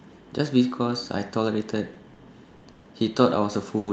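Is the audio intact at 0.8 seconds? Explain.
Yes, the speech at 0.8 seconds is intact, with no dropout, glitch or other fault at that moment.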